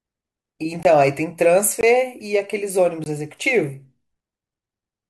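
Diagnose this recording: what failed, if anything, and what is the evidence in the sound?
The driver or buffer stage most likely failed: the speech drops out three times in blocks of digital silence, at 0.83–0.85 s, 1.81–1.83 s and 3.04–3.06 s, each 20 ms long. Each block was most likely zeroed when the output buffer went unfilled in time, and the cut and return are abrupt, with no fade.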